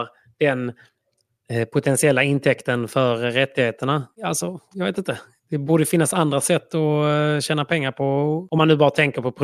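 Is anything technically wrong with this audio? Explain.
No, nothing technically wrong turns up anywhere in this speech recording, so there's nothing here to flag.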